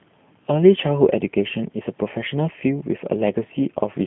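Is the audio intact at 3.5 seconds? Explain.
No. At 3.5 s the speech carries G.729 codec damage, present throughout. The sound fits 8 kbit/s coding, rebuilt from pulses and filters. It sounds rough and synthetic, with nothing above 3.7 kHz.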